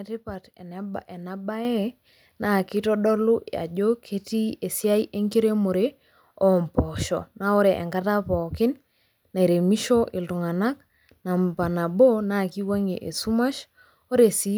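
A microphone volume step-up occurs at 1.65 s, where the level of the speech and the room sound behind it jumps by about 7 dB at the same instant. The change is abrupt rather than a gradual swell, which points to the call software judging the microphone too quiet and raising the device's input volume in a single move. Because the voice and the background rise together, it sounds like the whole signal suddenly moving closer.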